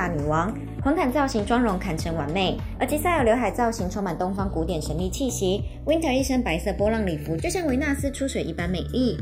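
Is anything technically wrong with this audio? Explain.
Yes. Channels drifting apart, throughout: clocks about 70 ppm apart let inter-channel delay creep to about 0.7 ms, sweeping comb notches heard as slow flanging in mono.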